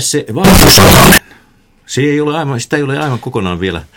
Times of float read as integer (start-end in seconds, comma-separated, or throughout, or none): 0.44-1.18